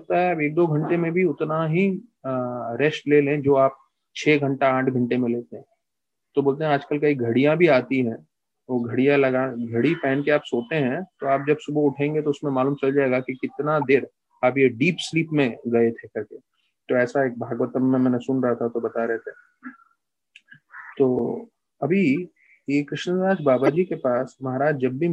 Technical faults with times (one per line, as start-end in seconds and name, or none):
13.81-13.84 corrupt frame decoded
20.92-20.95 corrupt frame decoded
22.17 corrupt frame decoded
23.66-23.69 corrupt frame decoded